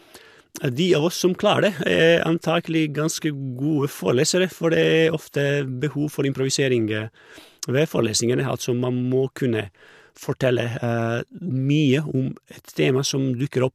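Speech, with nothing technically wrong to be heard anywhere in the recording. No dropouts, distortion or timing problems turn up at any point.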